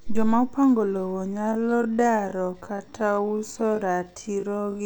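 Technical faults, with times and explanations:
1.31–4.86 s, time-stretched section: after "opango lowo" the pace abruptly slows to about 0.54 times speed at unchanged pitch, likely from software repeating short pieces, so it drags. Spectrogram harmonics keep their height but stretch; the waveform shows repeated grains.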